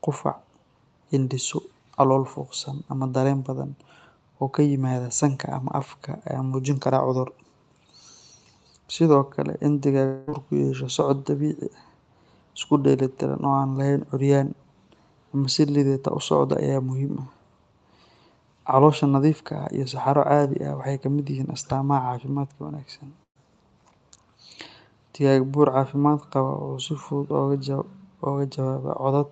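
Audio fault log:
10.05–10.29 s, long network dropout: for about 0.24 s nothing new comes through, and the gap gets papered over with a stretched-out continuation of the last sound that fades as a buzz or hiss, likely a network stall; when audio resumes, roughly 220 ms of it has simply gone missing.
23.23–23.37 s, burst of packet loss: a run of packets didn't make it, so the receiver holds the last bit of sound and fades it out, giving a short fill that drops to silence for most of its length before speech jumps back in with about 120 ms skipped.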